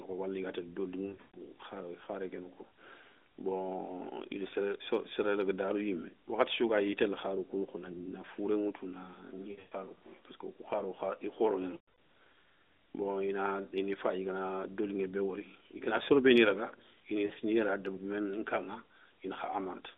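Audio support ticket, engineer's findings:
Lost AMR speech frames: radio errors failed frame checksums, and the decoder concealed them by repeating the last good pitch and vocal tract settings at falling gain. Heard as smeared, fading dropouts at 1.06–1.37 s after "ga télé", 9.52–9.72 s after "na fouré ŋoutou na", 11.74–11.94 s, and 17.26–17.32 s after "soro béni raga ini". Runs up to 120 ms fade toward silence; the last event is brief, 40 ms. Narrowband codec band of about 250 Hz to 3.7 kHz.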